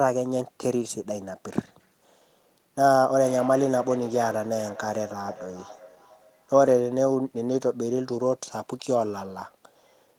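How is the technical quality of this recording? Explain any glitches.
The recording has one clear fault, a feedback echo between two devices, from 2.92 to 6.63 s. A second device in the room replays this microphone's signal, which is picked up again outside the reach of the local echo canceller. The sound returns roughly every 400 ms, thinner and more ringing, peaking about 17 dB below the speech. On a waveform or spectrogram it appears as faded copies of each burst, evenly spaced along the time axis.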